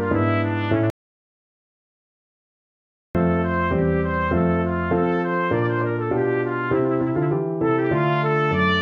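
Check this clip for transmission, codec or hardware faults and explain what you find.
One fault, an audio dropout to silence from 0.9 to 3.15 s: the input was likely lost while recording continued, so about 2.25 s becomes dead silence, without room tone.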